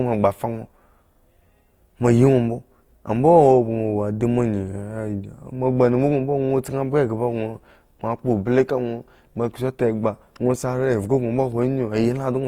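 From start to finish the speech carries plainly audible Opus compression damage. Tones turn grainy and rough and gain a noisy edge rather than a swirl. The likely cause is an Opus encoder in its music (CELT) mode at a low rate, which fits 24 kbps; short of bits, it refills bands by folding lower ones or with noise. A spectrogram shows full bandwidth up to 20.2 kHz, with few holes but with a speckled, smeared texture in the upper bands.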